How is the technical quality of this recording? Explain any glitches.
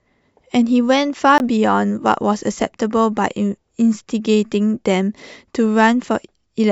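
The recording has one audible glitch, a brief dropout early in the speech.

A block of digital silence runs from 1.38 to 1.40 s: about 20 ms of samples were replaced by zeros, likely because the output buffer was not filled in time. The speech cuts abruptly to nothing and back with no fade, and the 20 ms gap gives a short hole.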